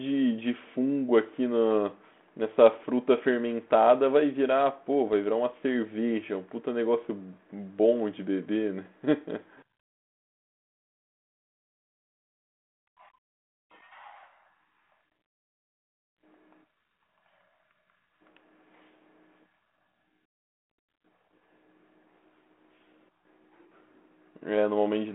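No technical faults can be heard anywhere in the speech. The telephone link it comes over, G.726 ADPCM at 32 kbit/s, limits the sound to the band from 200 Hz to 3.5 kHz and leaves only a light coding texture.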